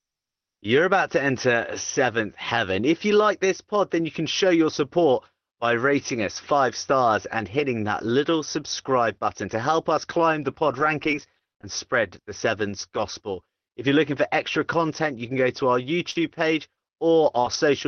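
Speech, carried over an Opus call path whose top end stops around 6 kHz. From 10.67 to 11.65 s the voice turns choppy. This is repeated packet loss, producing a robotic sound: six separate gaps, the longest 23 ms, were each patched by stretching the preceding sound. About 100 ms of audio was concealed, roughly a tenth of that stretch. At 12.79 and 12.97 s two brief 20 ms moments sound rougher and noisier. Each is a lost packet rebuilt from error correction: the following packet carried a low-bitrate copy, so the decoder filled the hole without any audible gap. Between 16.11 and 17.55 s a few brief hiccups and smears interrupt otherwise clear sound. These are scattered short gaps: around three lost or late packets, the longest near 40 ms, concealed by continuing the last sound.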